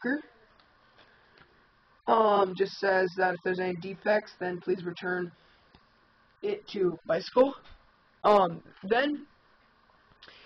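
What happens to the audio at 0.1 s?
Nothing goes wrong at 0.1 s; the audio is intact at that point.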